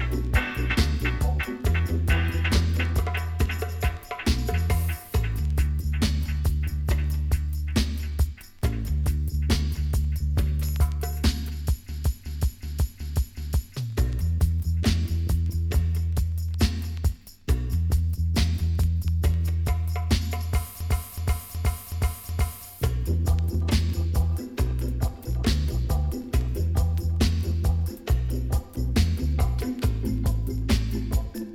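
System hang loops at 11.89–13.75 s and 20.81–22.66 s: the system stalled while the hardware replayed one 0.37 s buffer, which fits a 16384-sample buffer, five times at 2.69 Hz, producing a stuttering repeat.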